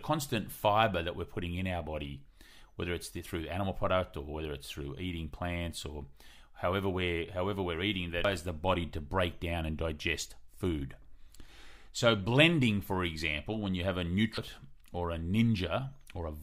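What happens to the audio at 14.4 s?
At 14.38 s the speech hits damaged data in the compressed stream. Part of the encoded data there is corrupt. The decoder misreads the affected frame and loses sync, then hunts for the next valid frame header. This comes through as a brief chirp or blip.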